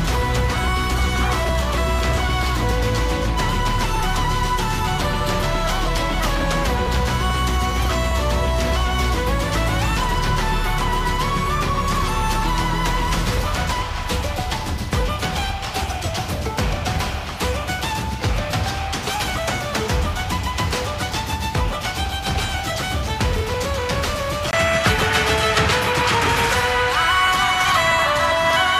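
At 4.00 s there is a brief blip, the mark of damaged data in a compressed stream. A stretch of the encoded bitstream was corrupted, so the decoder misread the affected frame and lost sync, then recovered at the next valid header.

At 24.51 s the sound shifts character for the rest of the clip. A gap of about 20 ms comes first. After it, nothing is left above 13 kHz, the level moves by around 5 dB, and a new background noise sits well below the signal. This is likely an input switched to a poorer device. The change in noise floor and level sets it apart from a codec simply lowering its bandwidth, since a codec would keep the same background and level.

At 28.31 s, within that final section, a second brief blip from damaged data in a compressed stream follows.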